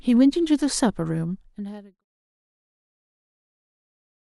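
No technical faults can be heard in the speech. The level fades out smoothly from around one second, with no click or hard edge, reaching silence by 2.05 s.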